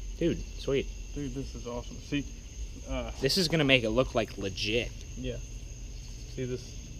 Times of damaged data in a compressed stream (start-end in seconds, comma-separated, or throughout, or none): none